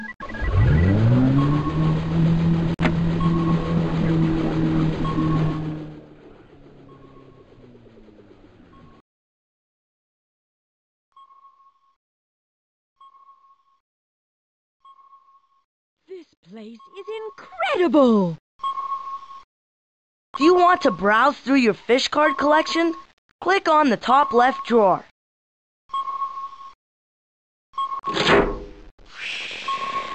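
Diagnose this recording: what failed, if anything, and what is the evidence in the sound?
Zipper noise, from gain applied in stepped increments at the buffer stage. Fine ticking rides on the fade down of about 25 dB from 5.44 to 6.10 s and the rise back from 16.83 to 17.98 s, at roughly 50 steps per second. Unlike random clicks, the ticks occur only while the level moves.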